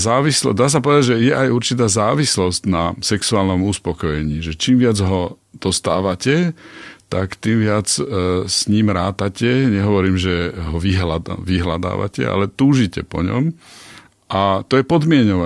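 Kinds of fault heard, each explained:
None heard: no faults on the speech track.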